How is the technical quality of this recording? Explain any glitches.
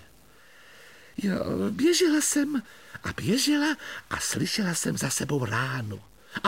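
The technical quality is compromised throughout by a stuck bit. A grainy noise runs across the whole clip, and even the pauses are filled with a low noise floor. One converter or data bit is likely stuck, shifting about half the samples by a fixed step of around -50 dBFS. Unlike clipping, the distortion is present at quiet levels too.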